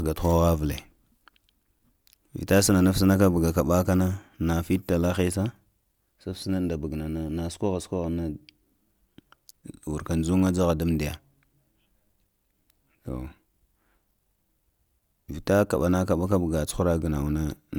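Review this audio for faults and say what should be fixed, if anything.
Nothing needs fixing, since the speech signal comes through intact with no technical faults to be heard anywhere in the recording.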